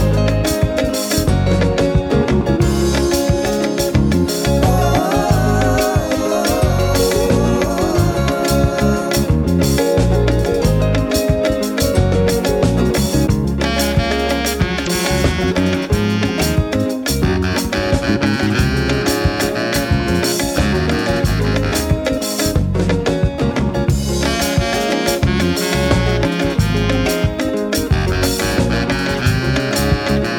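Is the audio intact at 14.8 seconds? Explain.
No. Between 14.83 and 14.87 s the audio is broken by damaged data in the compressed stream. For about 44 ms the stored bytes are wrong, so the decoder misreads the frames there, loses its place in the stream and has to hunt for the next valid frame header before normal decoding resumes. The result is a short chirp, squawk, click or hole.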